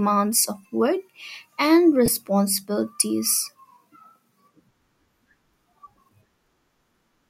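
At 2.06 to 2.08 s, just after "of work and", lost LE Audio frames cause a brief gap. The decoder fills roughly 20 ms, which fits two lost frames, by repeating the last spectrum with random signs. It sounds like a short, noisy smear in the speech.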